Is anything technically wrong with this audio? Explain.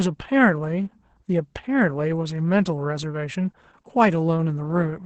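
Yes. Throughout the speech, Opus voice compression is at work. The codec appears to be running its SILK linear-prediction mode in wideband at a very low rate, consistent with roughly 10 kbps in 20 ms frames, so the excitation is coded coarsely and little detail survives. The damage is heavy: there is nothing above 8.8 kHz, and the voice comes out muffled, hoarse and slightly robotic, with a dull quality across every phrase.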